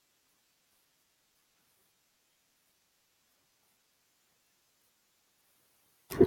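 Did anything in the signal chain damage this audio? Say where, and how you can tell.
Yes, at the codec stage: an adaptive stream starting at a low bitrate. From 0.0 to 4.0 s the speech has dull, synthetic treble, which fits HE-AAC at 32 kbit/s. At 4.0 s it jumps to better, full-band AAC-LC at 96 kbit/s with no gap.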